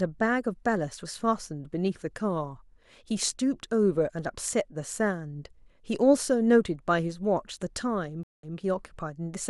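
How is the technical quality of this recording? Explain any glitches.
The recording has one glitch, near the end of the speech.

Between 8.23 and 8.57 s there is a stream reconnect. The connection dropped, and the player fell silent for 198 ms. It then reconnected and started a fresh decoder. The server resent earlier data, so the sound resumes 140 ms back and repeats briefly. It fades in rather than starting at full level.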